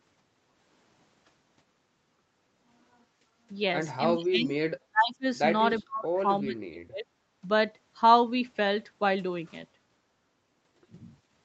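Speech suppressed in double talk: an echo canceller, likely confused by both sides talking at once, pulls the speech down by about 25 to 40 dB at 4.13–4.54, 4.86–5.25 and 5.8–7.08 s, so it drops out in pieces.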